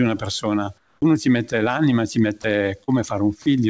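From 0.78 to 1.02 s, comfort noise replaces the background: for 240 ms the real room sound gives way to steady, featureless noise about 6 dB quieter, likely from discontinuous transmission.

At 2.42 to 2.44 s and again at 3.42 to 3.46 s, sound is dropped by the voice detector. It likely misread part of the speech as background and stopped sending. About 20 ms of speech vanishes each time, replaced by brief steady noise lasting 20 ms and 40 ms respectively.

From 2.84 to 2.90 s, a short concealed packet loss leaves a 40 ms hole. The receiver fills it by extending the preceding sound, heard as a brief smear before the audio resumes. Throughout, nothing is present above 8 kHz, which fits a wideband call codec.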